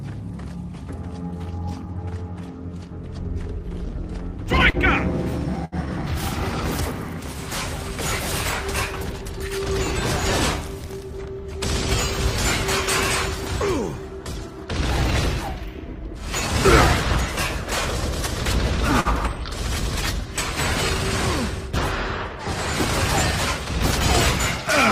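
The audio carries three kinds of network playback fault. Scattered short gaps between 3.79 and 5.87 s: three small losses, the longest around 70 ms, were each patched by continuing the preceding sound, leaving brief ticks and smears rather than one held tone. Jitter buffer speed-up at 10.70 to 11.27 s (111% speed, roughly 70 ms trimmed) and 16.08 to 17.22 s (103%, about 40 ms trimmed): repeated pitch-period cuts speed up the sound while its pitch stays put, unlike a resampling error. A short stall from a late packet at 19.01 to 19.08 s stretches the last sound by 46 ms with a slight buzz or dip, then resumes where it left off with nothing skipped.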